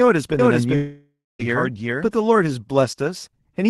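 Speech with two overlapping faults. From 0.39 to 2.27 s a doubled audio track is audible: a second, full-band copy trails the original by roughly 0.4 s at about the same level, with no decay or room colour, and it starts and stops abruptly, likely a second capture through a slower path. From 0.75 to 1.41 s there is a long network dropout. The last sound is continued as a fading buzz or hiss, the final stretch of about 0.23 s is near silence, and the audio resumes with roughly 0.64 s never played.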